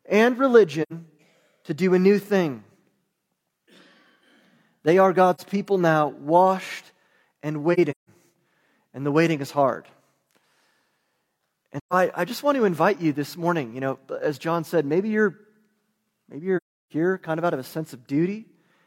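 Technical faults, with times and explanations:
0.82–0.92 s: AAC frame loss with muting, an 85 ms soft-faded gap fitting two lost frames; the spectrogram shows a full-band blank column with tapered edges.
5.35–5.40 s: AAC frame loss with muting, a short 43 ms hole just before "people now washed and", consistent with one zeroed frame; the waveform dips smoothly to silence and recovers.
7.73–8.09 s: AAC frame loss with muting after "people now washed and", with about 213 ms missing in scattered holes across 341 ms, the longest roughly 150 ms; the spectrogram shows several blank vertical bands.
11.79–11.93 s: AAC frame loss with muting, a 128 ms soft-edged dropout fitting three lost frames; the overlapping windows fade the sound out and back, leaving a tapered empty band.
16.57–16.92 s: AAC frame loss with muting, a 341 ms gap just before "kind of out of", fitting a run of consecutive lost frames; the waveform shows a long flat stretch with smooth ramps at both ends.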